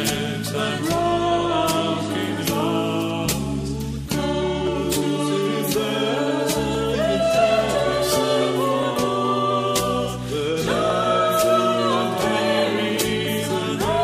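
From 0.52 s to 12.97 s, a click recurs every 2.08 s, about seven times in all. These are clock drift buffer slips. Each click marks a jump in the waveform, as if a short block of samples, around fifteen, were skipped or played twice. The likely cause is two devices on separate clocks, differing by roughly a couple of hundred parts per million. The buffer between them creeps until it must slip. The steady spacing gives it away.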